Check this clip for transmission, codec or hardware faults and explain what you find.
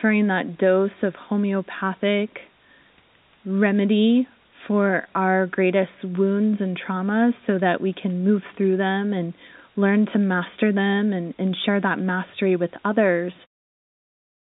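No transmission, codec or hardware faults.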